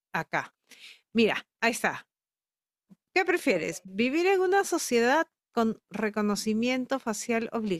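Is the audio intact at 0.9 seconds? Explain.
Yes, the audio at 0.9 seconds is intact, with no dropout, click, distortion or other fault at that moment.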